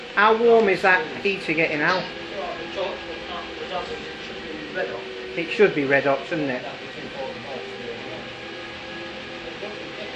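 No technical faults can be heard anywhere in the clip.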